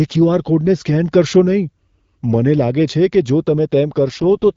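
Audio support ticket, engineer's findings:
AMR rate drop, 4.07 to 4.54 s. Speech turns rough and synthetic near the end, with no gap and no loss of band. The AMR-WB encoder falls back to a lower mode, consistent with a step from 12.65 to 6.6 kbit/s. Fewer bits go to the voice model. Before this, light AMR-WB coding colour.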